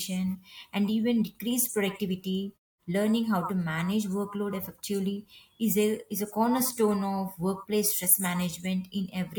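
No faults detected in this speech recording; the background drops to silence in the pauses and returns on time with nothing clipped.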